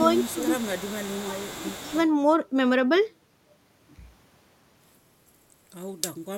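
Echo leak from 0.01 to 2.07 s in this speech: a faint copy trails the talker by 179 ms, about 20 dB down, likely a far-end echo canceller missing loudspeaker pickup. Speech suppressed in double talk at 0.33–0.46 s and 1.23–1.96 s: the voice dips around 10 dB, then around 20 dB, likely the canceller ducking both talkers during overlap.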